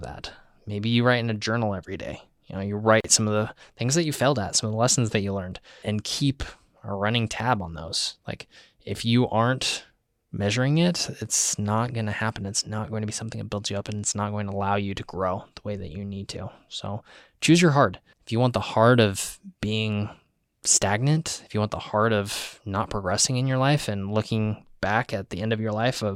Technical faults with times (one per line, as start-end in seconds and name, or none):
3.00-3.04 gap at a join of encoded pieces